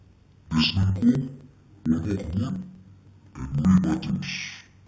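Interleaved audio read as planar runs throughout the speech. Each 64 ms block, which fits a 1024-sample block, holds alternating left and right samples, but the first half is taken as the left channel and the second half as the right. Each half is stretched across the whole block at half speed, so the voice drops an octave (12 semitones) while its overall pace holds, sounding doubled and choppy with a stutter at 15.6 Hz.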